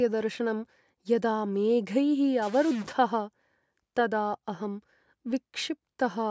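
From 2.42 to 2.92 s the speech turns distorted. This is a stuck bit, likely one data line held fixed, so about half the samples shift by a set step. The waveform shows square-edged offsets, and the spectrogram fills with broadband hash up to 8 kHz.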